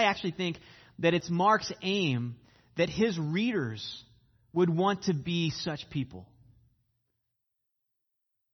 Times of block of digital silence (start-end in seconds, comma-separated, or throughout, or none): 1.21